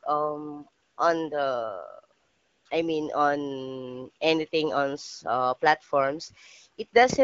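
Twice the phone judged the talker silent and sent no speech frames, so the receiver substituted AMR comfort noise, a steady, smooth synthetic hiss replacing the real background, from 0.83 to 0.97 s and from 2.19 to 2.65 s, just before "I mean on anything". The lightly coded AMR-WB speech at 12.65 kbit/s sounds clear around these gaps.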